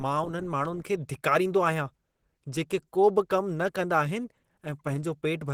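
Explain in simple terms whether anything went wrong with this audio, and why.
Yes. From start to finish the speech sounds hoarse and plainly rough, with a grainy edge, even though high frequencies still extend to the top of the range. That is likely Opus compression, running in its mixed speech-and-music mode at a low data rate.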